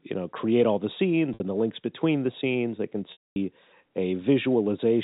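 This speech clip, carried over G.711 telephone coding, has two gaps from packet loss with pitch repetition. At 1.34 to 1.40 s, after "know create all the" and before "and the links between", about 60 ms is lost. The receiver repeats the last pitch period, so the sound holds briefly with a buzzy tone. At 3.12 to 3.36 s, 240 ms goes missing. The repeated pitch fades into silence, and speech returns with a short cross-fade. Both gaps fit 20 ms packets.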